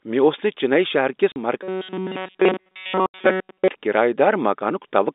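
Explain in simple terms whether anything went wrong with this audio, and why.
Packet loss filled with silence happens twice: a gap of 40 ms at 1.32 s and a longer one of 80 ms from 3.06 to 3.14 s. Speech travels over a call network in small packets. When some never arrive, the receiver plays nothing in their place, so the speech drops out abruptly. The first hole fits two missing 20 ms packets, and the second fits four.

Robotic sound from repeated short buffers runs from 1.62 to 3.69 s. It overlaps the second gap. Throughout that stretch the voice turns into a stiff, metallic buzz at a fixed pitch of 188 Hz, though it still roughly follows the speech. The likely cause is new audio arriving too slowly, so the software keeps replaying a tiny slice about 5 ms long instead of playing fresh sound. Almost none of the real audio in that span gets through. The constant repeating creates the steady buzz. 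All of this is heard through an ordinary telephone line format, G.711 telephone coding, which carries the sound in the narrow band between roughly 250 Hz and 3.7 kHz.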